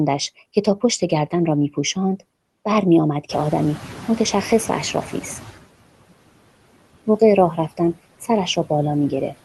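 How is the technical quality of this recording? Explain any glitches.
The recording carries noise suppressor artifacts throughout, plus one stretch where the suppressor falls behind a sudden rise in background noise. The sound passes through an Opus call path that cuts off above 12 kHz.

Noise suppressor artifacts run through the whole clip. The suppressor pulls bands it judges to be steady noise down by about 18 dB, frame by frame. A spectrogram shows a speckled, pumping noise floor between speech.

The noise suppressor catching up happens from 3.29 to 5.58 s. Room noise jumps about 16 dB around three and a half seconds, and the stale noise estimate lets it through with only about 11 dB of reduction. The noise then sinks over roughly 2.3 s, visible as a brightened floor fading back down.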